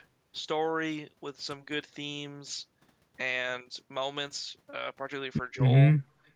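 At 6.06 s the background is gated by the echo canceller. While the far end played through the loudspeaker, the canceller pulled the microphone down by about 10 dB. The room sound dips for roughly 150 ms. It returns at 6.22 s, once the canceller releases.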